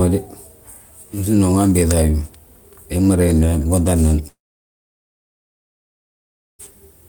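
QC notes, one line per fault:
4.27–6.67 s, long network dropout. The speech cuts off and the last sound carries on briefly as a fading buzz. About 2.2 s of silence follows. Speech returns at 6.67 s with the missing stretch never played. Likely cause: packets stopped arriving.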